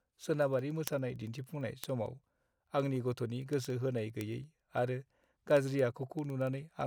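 From 0.14 s to 6.87 s the speech carries word clock ticks: a steady train of sharp clicks of uneven strength at roughly twenty per second, around a hundred in all. The receiving device was reading a digital link on its own clock rather than locking to the sender's, and the two rates differed by a few hundred parts per million. Each time they slipped past each other, a single sample was dropped or repeated, leaving a tiny discontinuity heard as a tick.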